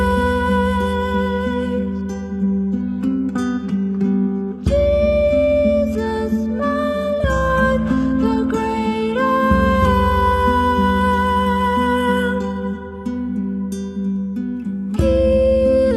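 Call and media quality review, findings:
Adaptive stream at a lower bitrate, 0.94–12.94 s: player switched to a low-bitrate rendition. Sudden switch, no gap, nothing above 12.3 kHz, fits a drop to about 16 kbit/s.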